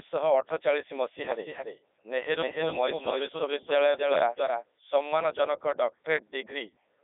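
Speech running through a Codec 2 vocoder for its whole length, with heavy damage: the voice is robotic and buzzy because it is rebuilt from sine waves using only pitch, voicing and envelope, a sound that fits the 3.2 kbit/s mode. The waveform loses its natural shape, and a spectrogram shows neat harmonic stripes inside a 300 Hz to 3.6 kHz band, with nothing above 3.8 kHz.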